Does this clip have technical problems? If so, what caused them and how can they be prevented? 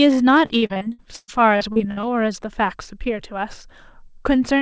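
Yes. Repeated packet loss (robotic sound) from 0.46 to 2.05 s: about a dozen dropouts, the longest 113 ms, patched by stretching prior audio, making roughly a third of that stretch choppy. Prevent it with a more stable network path, forward error correction, or a larger jitter buffer.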